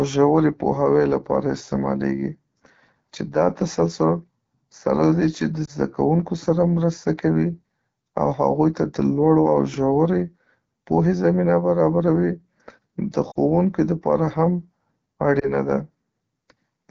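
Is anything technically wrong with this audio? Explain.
Yes. The speech carries two faults.

Throughout the clip, the AMR wideband (HD Voice) codec is running at a low rate, which fits the 8.85 kbit/s mode. AMR-WB models speech below 6.4 kHz as pulses through a vocal tract filter and fills 6.4 to 7 kHz with shaped noise. At this rate the model is coarse, so the speech sounds rough and raspy. Unlike a narrowband codec, the band still reaches about 7 kHz. The top simply sounds hissy rather than cut off.

Lost AMR speech frames cause three brief disturbances, at 5.65 to 5.70 s, 13.31 to 13.38 s and 15.39 to 15.49 s. Radio errors corrupted those frames, so the decoder replayed the last good pitch and vocal tract settings at falling gain. The single-frame events are short dips or warbles, and the longest is the 40 ms gap near 13.3 s, where the sound drops to near silence. This concealment tells them apart from plain dropouts: there is no hard silence or click, just a smeared, briefly weakened sound that recovers roughly.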